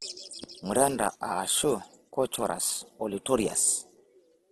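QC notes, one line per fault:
Throughout, Opus compression: speech turns grainy and rough, not swirly like MP3, with nothing above 12.4 kHz; likely bit-starved CELT-mode Opus, fitting about 12 kbps.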